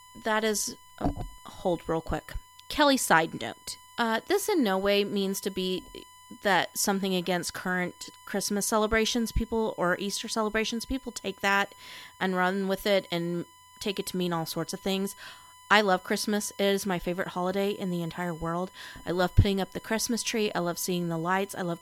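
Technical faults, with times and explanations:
Throughout, USB whine: a steady 1 kHz tone sits well below the speech, leaking in from the USB bus's 1 ms frame current through power or ground.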